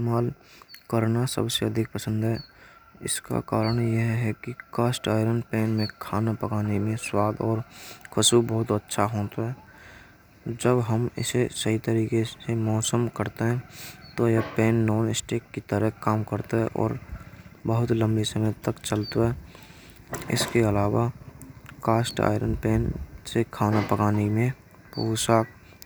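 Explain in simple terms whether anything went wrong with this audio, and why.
Something did go wrong, briefly. At 22.11 s the speech carries a single sharp tick, a bit error spike. One binary digit in the stored or transmitted audio flipped, so a couple of samples jumped to a wrong value and snapped straight back, producing a click unrelated to the speech.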